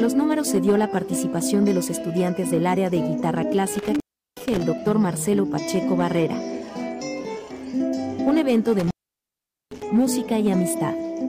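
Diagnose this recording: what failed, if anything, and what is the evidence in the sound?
The sound drops out or breaks up twice, from 3.73 to 4.63 s and from 8.79 to 9.83 s, with crackle at the edges and hiss in the gaps. This is an intermittent contact in the analogue wiring: a loose plug or cable opening for about 0.37 s, then about 0.81 s.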